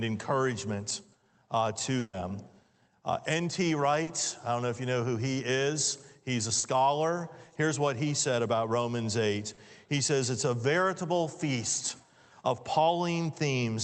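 A burst of packet loss runs from 1.99 to 2.15 s. About 140 ms went missing, and the receiver stretched the last sound into a fading buzz or hiss before a brief 20 ms silence.

Short concealed packet loss follows at 4.03 to 4.09 s, 6.59 to 6.65 s and 9.53 to 9.59 s. Each time about 40 ms was filled by continuing the preceding sound, giving a quick smear or wobble.

Throughout, the audio carries the Opus call path's coding noise and a high-frequency cut-off near 8 kHz, which fits a bitrate around 24 kbps.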